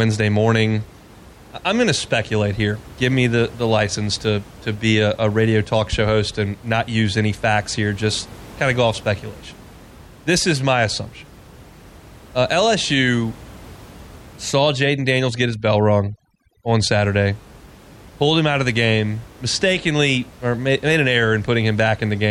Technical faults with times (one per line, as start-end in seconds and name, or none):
14.51-16.94 overdone noise removal